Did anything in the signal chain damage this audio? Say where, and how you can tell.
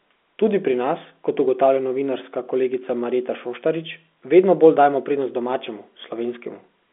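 No, nothing in the chain has harmed this speech; what you hear is an ordinary G.711 telephone line, probably A-law at 64 kbps, keeping roughly 250 Hz to 3.5 kHz as a phone call should.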